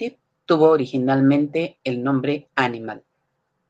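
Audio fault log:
No audio faults are present in this speech clip.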